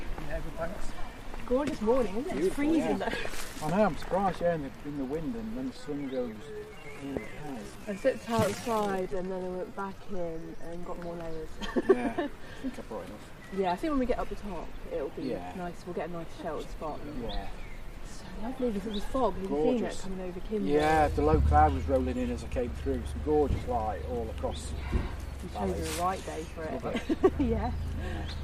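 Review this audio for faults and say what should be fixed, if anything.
From 5.69 to 10.83 s there's a time-stretched section: the pace drops to about 0.67 times normal while pitch holds steady, so it drags. Likely a pitch-preserving stretch repeating short slices to pad the length. To prevent it, re-edit or re-record to fit the slot instead of stretching.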